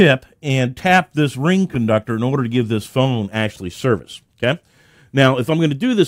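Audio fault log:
No fault found.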